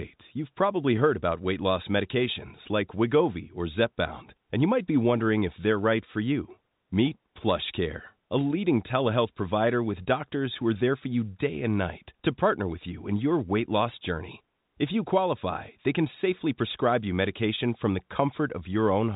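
No technical faults are heard anywhere in this speech.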